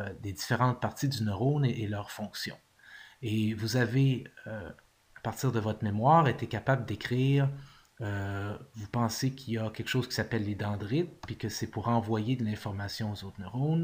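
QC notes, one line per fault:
No faults heard anywhere in this clip.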